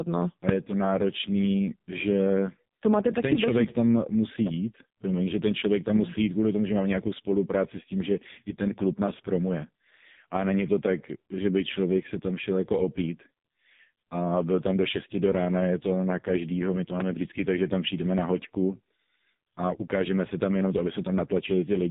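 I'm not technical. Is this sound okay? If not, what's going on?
No. The speech went through an AMR narrowband mobile codec squeezed very hard, so everything above 3.8 kHz is gone and voices sound buzzy, muffled and robotic throughout.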